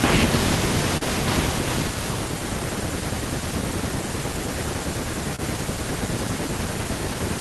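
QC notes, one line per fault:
Throughout: clock drift between sender and receiver. The sending side's clock runs slow, by about 2 percent, so audio arrives a little slower than the receiver plays it out. The jitter buffer keeps draining and the receiver has to pad the speech to stay fed. The result is a faint, recurring unevenness in timing across the clip, with the two stalls and the run of corrections below as its audible marks.
0.97–1.03 s and 5.36–5.41 s: short stall from a late packet. Each time the buffer ran empty before the next packet arrived, so the receiver held the last sound, for 39 ms and then 30 ms, and resumed from exactly where it stopped. No speech is lost. Instead a sound lingers slightly too long, with a brief buzzy or dipped quality where the stretched fill sits, and playback delay grows by the same amounts.
1.88–6.78 s: repeated timing corrections. Across this stretch the receiver keeps inserting small repeated slices to make up for the slow sender, running at 99 percent speed and adding something like 70 ms in total. 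The edits all lengthen the audio but are unevenly spaced, so the speech does not sound cut. It sounds very slightly dragged, with an unsteady pace and occasional tiny hiccups where a piece is doubled.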